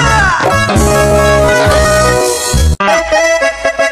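From 0.00 to 2.78 s the audio is a time-stretched section, slowed to 0.58 times normal pace with pitch unchanged, so it drags before snapping back to normal speed. Software likely repeated short pieces to fill a longer slot. A spectrogram would show blurred, drawn-out onsets over steady frequency lines, and the waveform would show repeating grain patterns.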